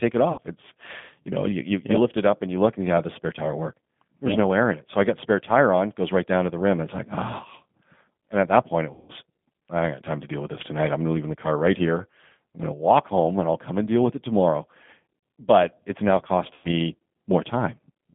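G.729 codec damage runs through the whole recording. The 8 kbit/s coder rebuilds the speech from a predictive filter and a few pulses per frame, which leaves it rough and faintly synthetic. The line band of about 150 Hz to 3.5 kHz removes all the brightness.

VoIP packet loss concealed by the speech codec occurs at 0.32 to 0.40 s, at 8.93 to 9.12 s (after "at that point it", before "I ain't got time") and at 16.54 to 16.69 s (after "it's now"). Gaps of about 60, 160 and 100 ms are filled by stretching the last frame into a fading buzzy tone or coloured noise, with weak, distorted sound just afterwards.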